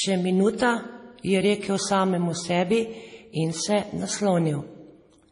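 Throughout the speech, a hard ceiling at 10.6 kHz and heavy swirly, watery smearing on s sounds point to MP3 compression at a low bitrate around 32 kbps, the likely cause. On a spectrogram, energy stops flat at 10.6 kHz, and weak bands flicker on and off between frames.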